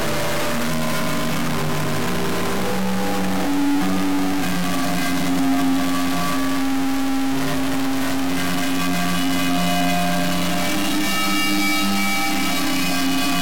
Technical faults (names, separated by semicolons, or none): stuck bit